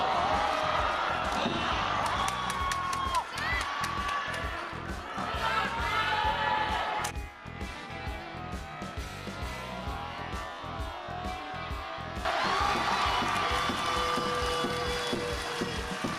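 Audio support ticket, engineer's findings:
Overlap-add ripple, throughout: metallic buzz near 300 Hz, level swinging about 6 dB per frame. Resynthesis windows overlap without constant-gain sum; frame-rate amplitude modulation.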